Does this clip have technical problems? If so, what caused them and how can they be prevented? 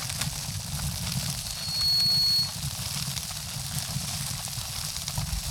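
Yes. A loudspeaker feedback squeal runs from 1.33 s to 2.67 s. A microphone was picking up a loudspeaker carrying its own signal, and at 4.3 kHz the gain around that loop rose above one, so that frequency reinforced itself on every pass. The sound is a single piercing tone that swells over about half a second to roughly 10 dB above the surrounding audio, then holds until the loop is broken. Keeping the microphone out of the loudspeaker's coverage, lowering the gain, or notching out 4.3 kHz would prevent it.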